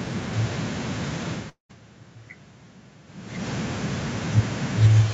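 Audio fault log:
1.49–1.71 s, long network dropout: the sound carries on past 1.49 s as a smeared, buzzy continuation that decays. It then drops to near silence for a little over a tenth of a second and resumes at 1.71 s with about 200 ms of material gone. The likely cause is that packets stopped arriving and the receiver stretched the last frame to cover the gap. On a waveform the envelope tapers into a flat stretch. A spectrogram shows blurred horizontal bands fading into an empty column.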